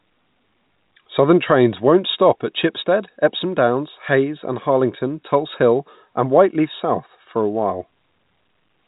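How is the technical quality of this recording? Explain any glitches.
The technical quality of this recording is sound, with no glitches to explain.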